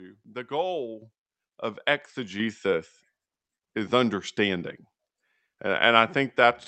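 Speech jumps abruptly louder twice, at 1.02 s by about 8 dB and at 2.4 s by about 4 dB, with voice and background rising together. That is microphone volume stepped up: the call software raised the input gain in steps, heard here through a call path band-limited to 8 kHz.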